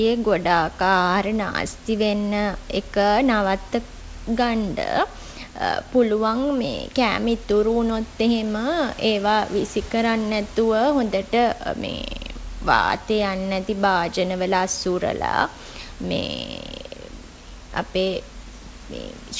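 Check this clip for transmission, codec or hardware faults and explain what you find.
I find no faults in this clip.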